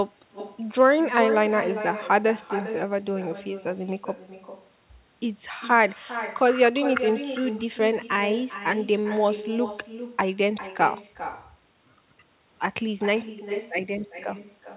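Speech over a call line that tops out at 4 kHz, which fits a G.711 A-law path. The problem throughout is echo with no canceller: every phrase comes back around 400 ms later, about 12 dB quieter and thinner. The far end's loudspeaker is feeding its own microphone, and nothing strips that out before it makes the trip back.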